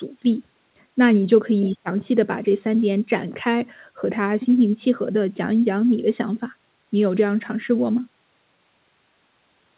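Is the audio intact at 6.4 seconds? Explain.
Yes, the audio at 6.4 seconds is intact, carrying only the narrow-band call sound of its G.711 path with nothing above 4 kHz.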